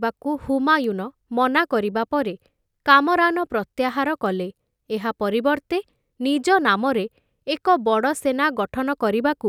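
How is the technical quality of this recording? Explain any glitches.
Two isolated bit error spikes mar this speech recording. The first, at 0.84 s, peaks at about -18 dBFS; the second, at 4.26 s, at about -24 dBFS. Each is a single corrupted sample: one flipped bit throws the value off by a power of two for an instant before it snaps back. Each is heard as one bright, broadband tick unrelated to the speech. Unlike a dropout or edit click, no signal goes missing and no waveform step follows.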